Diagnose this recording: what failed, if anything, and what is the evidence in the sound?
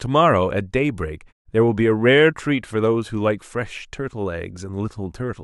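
Nothing in this speech recording points to a failure at any stage. The pauses fall to silence and the sound returns in time for each following phrase, which is the muting stage doing its job as intended.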